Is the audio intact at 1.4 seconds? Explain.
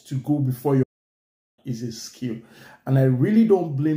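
No. A playback stall silences the output from 0.83 to 1.59 s, about 0.75 s, likely because the player ran out of data or its thread blocked before resuming.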